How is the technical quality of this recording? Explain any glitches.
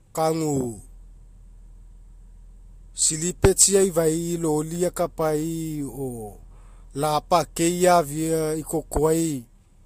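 The speech is held back by one fault that runs through the whole clip. It has nothing above 15.3 kHz. The likely cause is transcoding between lossy codecs: a low-rate Vorbis pass, around 47 kbit/s, then MP3 near 95 kbit/s. The MP3 stage spent bits re-encoding the earlier artefacts and added its own, so both layers of damage are heard together.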